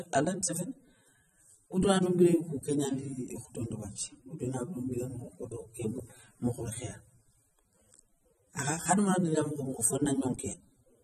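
Throughout, the speech carries plainly audible AAC compression damage, likely a low-bitrate encode around 24 kbps. It sounds dull and smeared, with nothing above 12.6 kHz.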